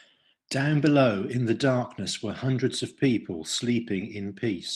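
Speech, with no technical fault to report anywhere in the recording.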